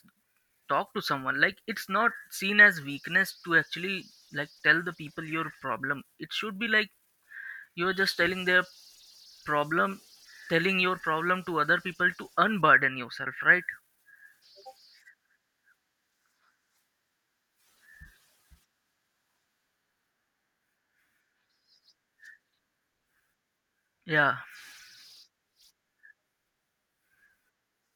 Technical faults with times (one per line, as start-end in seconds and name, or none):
none